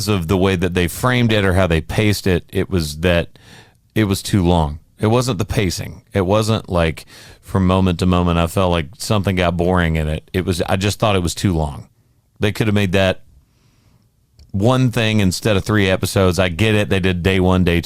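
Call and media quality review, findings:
DAB burbling, 1.29–1.37 s, between "way that they framed" and "or how they paced": brief burst. Weak DAB reception, with bit errors around half a percent slipping past error correction into MP2 audio data.

DAB burbling, 6.86–7.45 s, before "moment to moment I": longest run, errors nearer a few tenths of a percent.

DAB burbling, 11.14–11.36 s, between "was I just thought" and "too long": noise blips in single sub-bands rather than dropping out or smearing as packet-loss concealment would.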